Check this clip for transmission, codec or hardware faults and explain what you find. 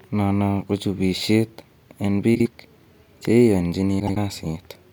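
Two faults of the same kind turn up in this speech clip: frames out of order, once from 2.35 to 2.48 s, just after "ko chubisiet en", and again from 4.00 to 4.17 s. Each is a brief garbled flutter. Two neighbouring blocks were decoded in swapped order, about 52 ms each the first time and 78 ms the second, consistent with two and three frames per block. Nothing is lost, only rearranged.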